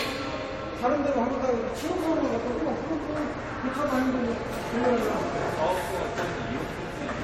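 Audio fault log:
throughout, generation loss: the audio has a swirly, hollow smear, with blurred attacks and nothing above 16.7 kHz. That's likely from around three rounds of lossy encoding at roughly 64 kbit/s AAC, each pass re-quantising on a shifted frame grid, so the noise and spectral holes stack up.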